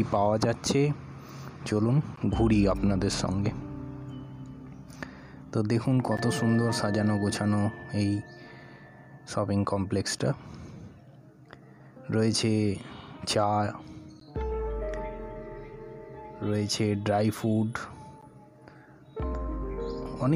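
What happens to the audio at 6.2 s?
At 6.17 s the sound drops out for a split second, a hole of about 13 ms. This is a gap between chunks: the audio was carried in pieces of 4.0 s, and silence was inserted at the join, perhaps from codec padding or late playback of the next piece. Nothing is lost, but the flow is interrupted right at that boundary.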